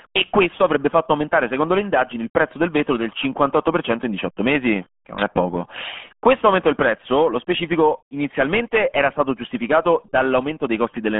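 RealAudio 14.4 codec damage runs throughout the speech. The audio has been squeezed through an early dial-up speech coder, and its heavy smearing fits a rate of about 8 kbit/s. The band is confined to roughly 150 Hz to 3.4 kHz, with nothing above 3.7 kHz, so sibilants and consonant detail vanish. Crude modelling of the voice leaves it muffled, gargly and watery.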